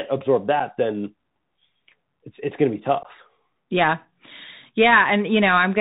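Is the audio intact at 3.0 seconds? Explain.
No. Right after "it's going to be", from 3.03 to 3.05 s, the speech drops out in a short hole with hard edges. The speech returns briefly quieter. This is unconcealed Bluetooth headset packet loss. About 15 ms of audio, a few headset packets' worth, never reached the phone. Nothing repaired the gap: silence or an idle pattern filled it, and the link's adaptive step had to rebuild the level afterwards.

Around that moment the speech also sounds boxed-in and dull, with nothing above 4 kHz. A grainy hiss sits underneath, and s sounds come out scratchy. This is the Bluetooth CVSD headset codec, and the damage is plainly audible. CVSD codes each sample as a single up-or-down bit, which fits a 64 kbps link. Its adaptive step cannot keep pace with sharp, bright sounds, which causes the roughness, and its constant up-and-down stepping leaves the granular noise floor.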